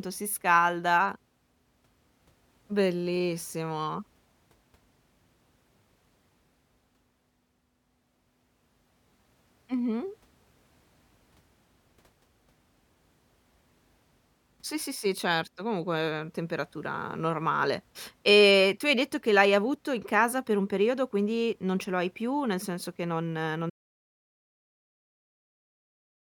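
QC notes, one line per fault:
23.7 s to end, audio dropout to silence: the input signal was likely lost, perhaps a disconnected device or failed link, while recording continued writing silence. Right after "senso che non non" the speech cuts off mid-flow into total silence with no room tone, and nothing returns.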